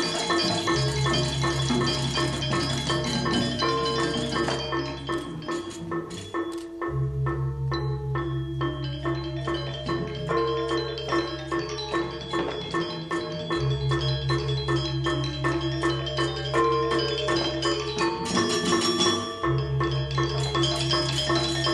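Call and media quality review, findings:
No faults found in this recording; the audio path performs as expected throughout.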